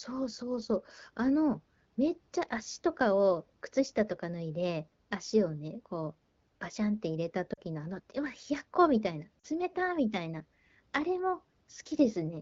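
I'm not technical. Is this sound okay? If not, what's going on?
No. There are two runs of lost AMR speech frames, at 7.54 to 7.60 s and 9.39 to 9.45 s: brief gaps where the phone stretched the preceding sound and let it fade to near silence. That differs from a clean dropout to silence.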